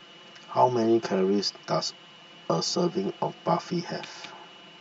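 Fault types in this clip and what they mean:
Channel delay (comb filtering): one channel of this speech arrives roughly 5 ms behind the other, and when the two are summed to mono, the content they share cancels at evenly spaced frequencies. The first notch sits near 100 Hz, with further notches repeating about every 200 Hz above it. These fixed cancellations run through the whole clip and give the speech a hollow, phasey colouring.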